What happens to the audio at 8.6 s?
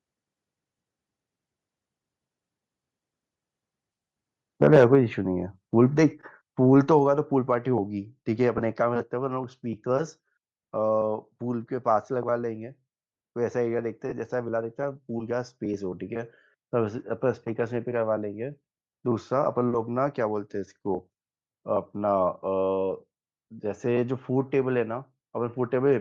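Lost LE Audio frames occur from 8.58 to 8.60 s: the decoder reused the previous spectrum with random signs, leaving a brief noisy smear that fits two missing 7.5 ms frames. Plainly audible breathy, grainy codec damage is also present, likely from Bluetooth LC3 compression, which zeroes much of the upper spectrum and fills it with noise.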